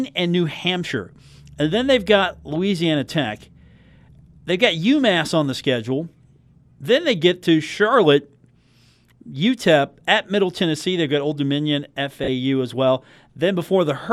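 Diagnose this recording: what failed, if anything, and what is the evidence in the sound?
Lost LE Audio frames at the Bluetooth codec stage: from 12.24 to 12.28 s, just before "as well", 40 ms of speech smears into noise as the LC3 decoder repeats its last spectrum with random signs.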